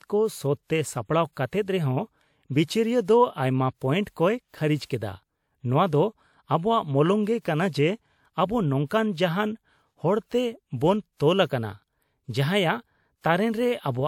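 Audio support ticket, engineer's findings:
Speech, whole clip: two layers of compression artefacts heard together. Likely transcoding between lossy codecs, WMA at 96 kbit/s re-encoded as MP3 at 96 kbit/s. MP3 spends bits on the earlier WMA artefacts and adds its own. Single-pass compression would leave only one artefact character, not two overlaid.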